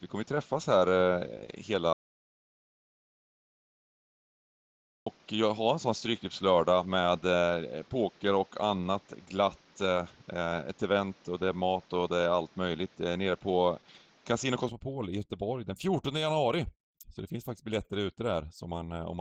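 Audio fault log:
throughout, Opus voice compression: The whole clip carries plainly audible low-rate codec damage, consistent with Opus at 16 kbps in hybrid mode with 20 ms frames. The lower band goes through SILK's linear-prediction coder and the band above 8 kHz through a thin CELT layer. With so few bits, the excitation is coded coarsely, so the speech comes across as hoarse and slightly robotic.
0.00–14.69 s, input switched to a poorer device: Until 14.69 s the speech is band-limited, with nothing above about 7.2 kHz, so it sounds dull and boxy. It also carries a noise floor of about 35 dB below the signal. At 14.69 s the top end opens up and the level shifts by about 5 dB, with no gap at the change. This is likely the recorder moving from a lesser microphone or headset profile to a better input.
1.93–5.06 s, audio dropout to silence: For 3.13 s the speech cuts out completely and the gap is silent. 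No room tone or background noise remains, which rules out a quiet passage. This is likely a lost input, such as a disconnected device or a stray mute, while the recorder kept writing silence. Whatever was spoken in that stretch is gone, and the speech resumes abruptly mid-flow at 5.06 s.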